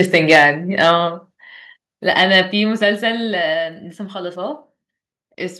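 Microphone overload at 0.00–0.45 s, 0.80–0.91 s and 2.19–2.38 s gives this speech clip a harsh, crackling edge on its loudest peaks. The waveform tops are flattened where the signal hits the converter's ceiling, likely because the microphone input was set too high. The overshoot is about 6 dB at first, shaving a few percent of samples. It falls to about 3 dB and then about 1 dB, where only a sliver is clipped. A microphone volume stepped down appears at 0.36 s, 1.35 s and 2.52 s, as sudden drops of about 2 dB, 3 dB and 4 dB. The speech and the background fall in level together, each drop following close on a distorted stretch. That pattern points to the call software likely lowering the device's input volume in steps after detecting the overload, so the crackle eases as the steps accumulate.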